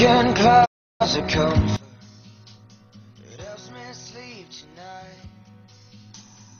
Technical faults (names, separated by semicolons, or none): digital broadcast dropout; one channel inverted